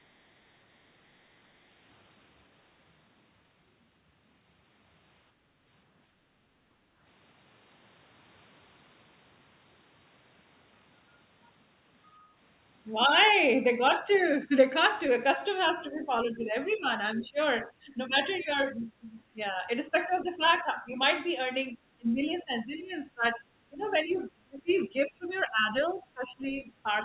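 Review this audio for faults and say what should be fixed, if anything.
Background gated by the echo canceller: while the loudspeaker played, the canceller clamped the microphone hard, so the room sound dips by about 6 dB from 5.34 to 5.46 s and about 7 dB from 6.75 to 6.99 s before recovering. Gentler suppression ramps that follow the actual echo level would keep the room sound steady.

Other side's voice leaking through: residual echo likely escaped the canceller, leaving faint scraps of a second voice at 15.65–16.06 s and 17.17–17.27 s (about 25 dB below the talker), 20.41–20.57 s (about 35 dB below), 23.83–24.17 s (about 30 dB below) and 25.37–25.42 s (about 40 dB below). Longer adaptive filters and better loudspeaker–microphone separation would remove it.

Speech suppressed in double talk: from 15.9 s to the end, both sides talking at once is the likely trigger for the canceller turning the talker down as well, pulling the voice down by around 15 dB at its deepest. 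Reliable double-talk detection that freezes suppression during overlap would prevent this.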